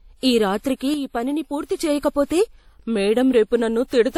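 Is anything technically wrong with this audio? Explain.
Yes, two things. Throughout the speech there's a blend of coding artefacts that points to transcoding between lossy codecs, likely a low-rate MP3 around 48 kbit/s re-encoded as WMA at about 64 kbit/s. The second encoder spends bits on the first one's smearing and adds its own, so both sets of grit sit together. Nothing is left above 18.8 kHz.

Then there's a sudden gain jump. From 0.94 s to 1.78 s the whole level drops by about 6 dB and then snaps back, with the voice and the background noise moving together. That's most likely a digital gain change applied from one sample to the next, with no ramp.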